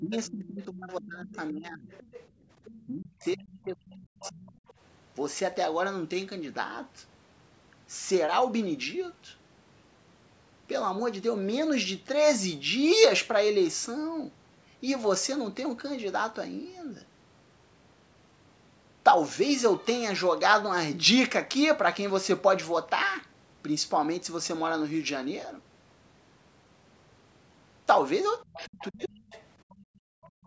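From 0.0 to 1.88 s the speech dips in level, by about 25 dB at its deepest, over about 1.5 s in total. This is speech suppressed in double talk, likely from the echo canceller being unable to tell the near talker from loudspeaker echo while both were active, so it pulled down the whole microphone signal, talker included.

Overlapping this, from 0.13 to 2.8 s, a second voice sits under the speech at about 20 dB below it. That is the other side's voice leaking through, likely loudspeaker playback that the echo canceller did not fully remove from the microphone path.

From 2.29 to 2.49 s the room sound drops by about 15 dB for 0.2 s and then returns. This is background gated by the echo canceller: it clamped the microphone hard while the loudspeaker was active and released it afterwards.

From 2.87 to 4.61 s the speech is suppressed in double talk again, about 1.5 s in total, with the deepest drop about 35 dB. 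The leaked voice returns from 4.2 to 4.73 s, again about 20 dB below the speech.

Near the end the same pattern repeats. Double-talk suppression runs from 28.41 to 29.32 s, about 0.7 s affected, with the deepest drop about 40 dB. Leakage of the other side's voice runs from 28.47 s to the end, about 20 dB below the speech. The background is then gated from 29.75 to 30.45 s, dropping by about 39 dB over about 0.7 s.

Throughout, the call microphone processing leaves nothing above 8 kHz.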